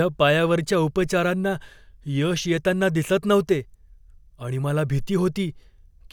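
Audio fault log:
No faults found in this audio.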